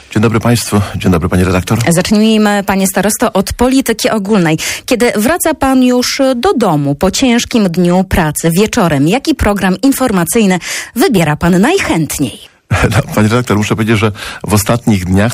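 Hard clipping runs right through the whole clip. The signal's driven about 3 dB past what the stage can pass, so roughly 3 percent of the samples get sliced flat, and those squared-off tops throw extra harmonics high up, giving a gritty crackle on louder moments.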